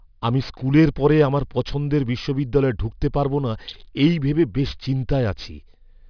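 Aliasing runs through the whole clip from start to finish. The speech was brought down to a lower sample rate without a proper low-pass filter first. The sound points to a drop from 44.1 kHz to about 11 kHz. Energy above the 5.5 kHz fold point reflects back down as false, unrelated tones. These sit roughly 25 dB below the speech. Sibilants sound gritty and metallic. The spectrum stays full right up to 5.5 kHz, then stops.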